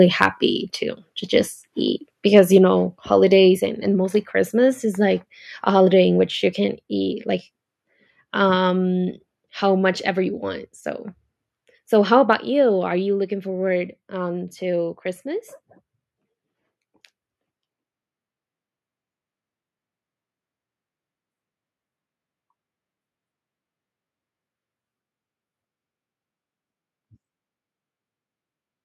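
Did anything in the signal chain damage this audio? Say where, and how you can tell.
Yes. Microphone overload at the converter: peaks at 0.22 to 0.26 s and 2.36 to 2.39 s get flattened and crackly, about 6 dB and 1 dB over, likely from input gain set too high.

The microphone volume steps down in the call processing: sudden level drops at 2.58, 3.6, 6.66, 8.7 and 12.33 s, about 4, 4, 2, 1 and 4 dB. That's likely automatic gain control reacting to the clipping.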